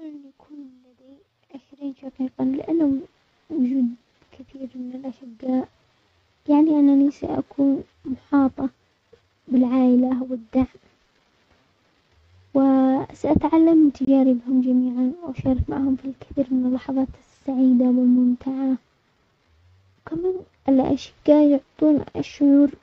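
At 14.05 to 14.08 s the speech drops out for about 23 ms, right before "جميعا واشارك معهم في", then picks up as if it had kept playing. That fits a Bluetooth dropout, likely one late packet the headphones discarded, leaving a brief hole.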